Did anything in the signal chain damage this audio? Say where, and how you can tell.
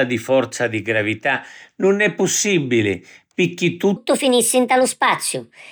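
Yes. From 3.96 s to the end, the speech turns hurried and higher, about five semitones up: a section at the wrong speed, running 1.32 times fast, likely from a playback or editing clock mismatch.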